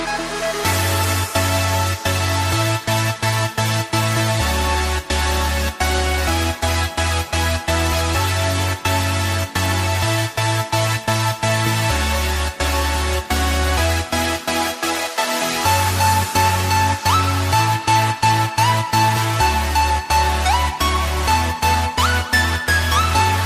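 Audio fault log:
No audible faults detected.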